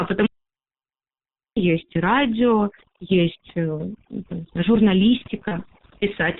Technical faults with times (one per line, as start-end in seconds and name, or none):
0.00-6.39 overdone noise removal
0.00-6.39 G.723.1 codec
0.26-1.56 audio dropout to silence
1.85-1.94 VoIP packet loss concealed by the speech codec
5.48-5.58 VoIP packet loss concealed by the speech codec